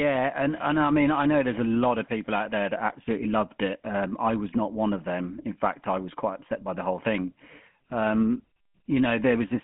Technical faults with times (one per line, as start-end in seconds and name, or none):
0.00-9.63 GSM full-rate codec